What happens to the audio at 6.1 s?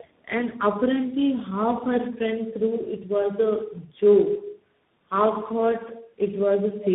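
At 6.1 s the speech carries tandem speech coding, present across the whole clip rather than at that moment alone. It sounds like three speech codecs in a row, ending in a CVSD stage, each re-coding the previous one's damage, leaving rough, muffled, warbly speech with nothing above 3.8 kHz.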